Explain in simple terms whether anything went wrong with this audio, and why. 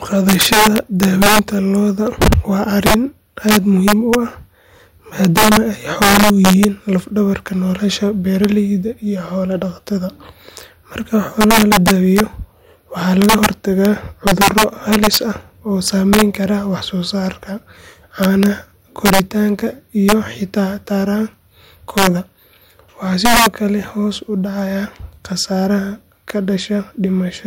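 Integer overflow runs through the whole speech clip. The loudest peaks wrap around to the opposite sign, producing harsh cracks far sharper than ordinary clipping.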